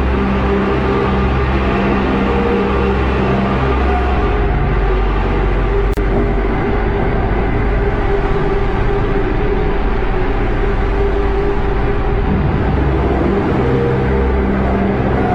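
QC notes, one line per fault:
5.94–5.97 s, gap at a join of encoded pieces: a break of about 34 ms opens in continuous sound, then the audio resumes where it stopped. Separately encoded sections were joined untrimmed, so one run's end padding and the next's start delay both remain.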